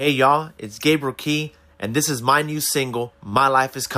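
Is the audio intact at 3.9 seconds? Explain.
Yes, the audio at 3.9 seconds is intact, with no audible fault at that moment.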